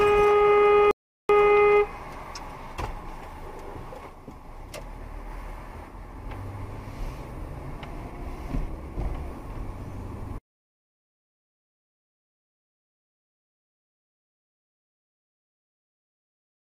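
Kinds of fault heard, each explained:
Rebuffering stall: the player used up its downloaded audio and had to pause until more data arrived, so the sound drops to silence from 0.91 to 1.29 s and then picks up exactly where it stopped, losing nothing but adding about 0.38 s.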